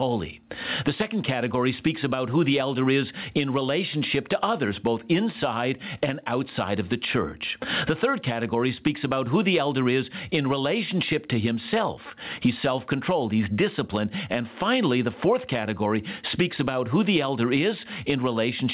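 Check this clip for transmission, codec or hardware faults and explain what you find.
One fault runs through the whole recording: gain pumping. The gain swings by around 20 dB. Loud and quiet stretches sit unnaturally close in level, so the speech sounds flattened and squashed. The likely cause is an input gain set far too high, with a fast limiter or compressor clamping it on every loud sound and releasing in the gaps. The call path itself tops out at 4 kHz, consistent with G.711 A-law at 64 kbps.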